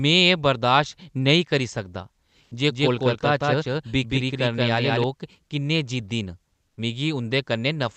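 At 2.43 to 2.51 s, just after "नेईं करी सकदा", about 80 ms of the real background gives way to comfort noise: a steady, featureless hiss about 3 dB louder. This is likely Opus discontinuous transmission. Unlike a dropout, the pause is filled rather than silent.

From 2.70 to 5.04 s, after "नेईं करी सकदा जे", a doubled audio track is audible. A full-band copy runs about 0.2 s behind at roughly equal level. It has no decay or room colour, and it starts and stops abruptly, which sets it apart from reverb or acoustic echo. A second, out-of-step capture path is the likely cause.

At 6.67 to 6.77 s, comfort noise again replaces the background for 100 ms, this time about 4 dB quieter. The whole clip is limited to about 8 kHz by the Opus call path.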